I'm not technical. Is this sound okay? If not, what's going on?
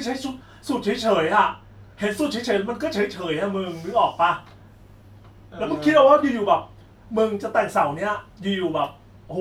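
Yes, this recording sounds fine, and there's nothing wrong with it that you'd need to worry about.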